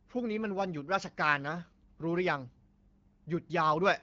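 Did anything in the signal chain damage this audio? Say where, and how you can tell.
No, nothing in the signal chain damaged this audio.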